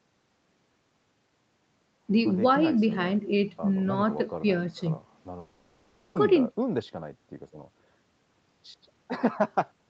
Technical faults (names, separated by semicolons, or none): long network dropout